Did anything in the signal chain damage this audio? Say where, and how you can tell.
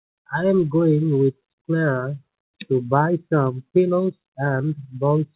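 No, nothing in the signal chain damaged this audio.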